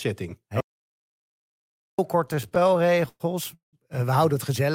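At 0.61 s the sound cuts off abruptly into an audio dropout to silence lasting until 1.99 s, so nearly 1.4 s of material is simply gone. The gap holds no room tone at all, which points to the input being lost, likely through a disconnected device or failed link, while the recorder kept writing silence. On a waveform it shows as a flat line, and on a spectrogram as a solid black band across every frequency.

From 2.25 s to 3.75 s come repeated stalls, a stutter of more than twenty brief hitches where the playback buffer ran dry and the receiver extended the last sound while waiting for more data. About half a second of filler was inserted, roughly a third of that span, with the longest hold reaching 180 ms, yet nothing is lost, so the audio drags and catches. A spectrogram shows smeared, frozen patches, and longer holds fade visibly on the waveform.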